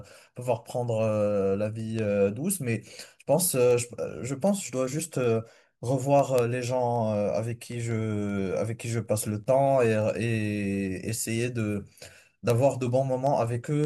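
From 0.27 s to 13.84 s the speech carries word clock ticks: sharp clicks of uneven strength recurring about every fifth of a second, roughly seventy in all. The receiving device is running on its own clock rather than locking to the incoming digital stream, and the two clocks differ by something on the order of 100 ppm. Each time they slip past one another, a single sample is dropped or repeated, leaving a small discontinuity that is heard as a tick.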